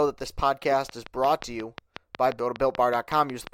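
From 0.89 s to 3.48 s a train of clicks ticks over the speech at a regular 5.6 per second, roughly twenty alike pulses peaking about 10 dB above the signal, likely from electrical interference or a faulty connection. Each shows as a thin vertical line across the spectrogram.

At 2.39 s damaged data in the compressed stream makes the decoder misread a frame and hunt for the next header, giving a brief glitch, seen as a waveform discontinuity.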